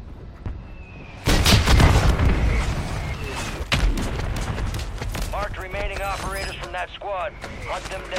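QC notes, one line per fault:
3.14 s, damaged data in a compressed stream: a brief chirp, squawk, click or short hole in the sound. Corrupted bytes made the decoder misread the frames there, lose sync and resume at the next frame header it found.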